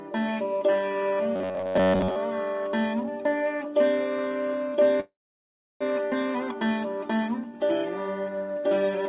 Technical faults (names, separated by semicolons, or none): robotic sound from repeated short buffers; call audio freeze